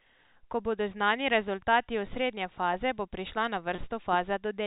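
At 3.75 s, about 30 ms of audio went missing in transit until 3.78 s, which fits three consecutive 10 ms packets being dropped. The receiver covered the gap with packet loss concealment by pitch repetition, replaying the last pitch period of the speech. In the sound, a brief held, slightly buzzy tone replaces the missing stretch before the speech resumes. The G.711 telephone coding keeps the whole clip band-limited below 4 kHz.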